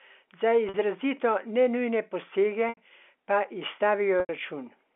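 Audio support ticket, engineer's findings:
Packet loss with pitch repetition at 0.69 s (50 ms), 2.69 s (80 ms), 4.2 s (90 ms): concealment loops last pitch period, buzzy hold fading out, cross-fade back.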